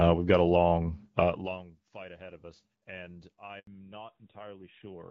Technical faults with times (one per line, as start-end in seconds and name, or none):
3.59-3.67 handover gap
3.67-5.10 fallback to narrowband